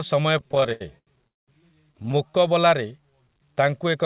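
From 0.38 to 1.27 s the speech breaks into repeated stalls (stutter): fourteen short holes where packets came late and the receiver stretched the last sound to cover them, about 274 ms in all, the longest near 83 ms, so roughly a third of that stretch is filled-in sound. Nothing is lost, but delivery keeps catching and dragging. Unlike a single freeze, the breaks are many and brief, each a little smeared repeat rather than a clean gap.

Right after, from 1.27 to 1.50 s, comes a call audio freeze: the sound stops and about 0.2 s of near silence sits in the middle of the speech before it resumes exactly where it left off. The cause is likely a run of held-up packets that emptied the jitter buffer, which then added that 202 ms to the playout delay. This is one solid pause, not a flicker.

A second stutter runs from 1.92 to 2.31 s, with eight much smaller gaps, none over about 15 ms and 79 ms in total. 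About 28% of the span is still concealed.

From 2.91 to 4.03 s a jitter buffer slow-down sets in. The receiver repeated single pitch periods or bits of pauses to rebuild its reserve, adding 138 ms, so the speech plays at about 88% speed while the pitch stays the same. Sounds are drawn out evenly rather than broken up, which separates it from the stutter. Throughout, the narrowband call path, G.711 A-law at 64 kbps, leaves nothing above 4 kHz.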